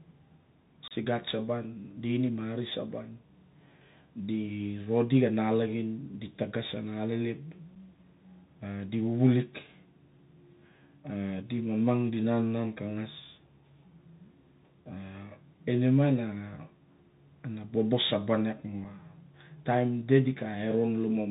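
From the start the speech carries the Bluetooth CVSD headset codec: a narrowband sound with nothing above 4 kHz, granular hiss underneath, and scratchy s sounds. This fits a 64 kbps one-bit delta modulator whose adaptive step can't track fast, loud high content. It differs from ordinary low-pass filtering in that hiss and slope distortion.

Unconcealed Bluetooth headset packet loss punches a hard-edged hole from 0.88 to 0.92 s, about 30 ms of missing speech, likely a few consecutive packets. Briefer single-packet dropouts follow at 7.75 s and 18.84 s. Unlike a concealed loss, no filler smooths them, so each gap cuts off abruptly and the speech returns briefly quieter.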